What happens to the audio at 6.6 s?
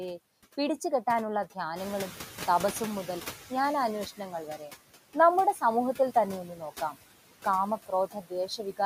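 From 6.48 to 6.62 s, the noise suppressor mistakes part of the speech for background and turns it down along with the noise by up to about 7 dB, so the sound there comes out swallowed and faint. Throughout the clip, noise suppressor artifacts are also present. The suppressor pulls noise-dominated bands down by about 15 dB, so the noise sinks between words and rises under them.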